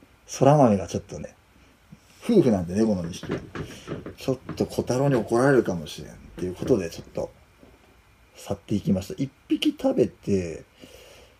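At 1.22 to 1.25 s, a broken MP3 bit reservoir is the likely cause: after missing frames, the next frame reaches back for borrowed data and decodes bytes from the wrong frame. The sound jumps ahead with a brief chirp or burst of noise lasting about one 26 ms frame.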